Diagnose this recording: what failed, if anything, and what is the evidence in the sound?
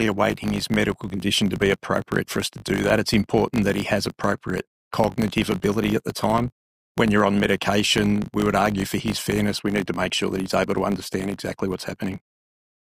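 Filter restarted on every block, throughout the recording. A steady 50 Hz buzz runs underneath the audio and rises and falls with its level. That points to the block-processing stage, in the driver or buffer path. A filter there is discarding its internal state at each block boundary and starting from silence, so every block opens with a small transient. Repeating 50 times a second, those ticks fuse into a buzz, which fits 20 ms blocks.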